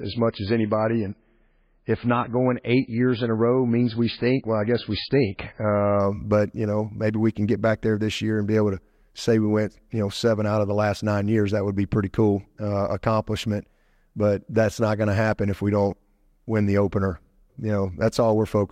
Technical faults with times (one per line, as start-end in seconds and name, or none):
0.00-6.00 adaptive stream starting at a low bitrate